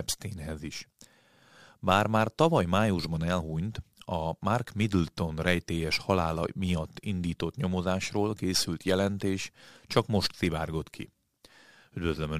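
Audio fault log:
The speech signal shows no technical faults at any point.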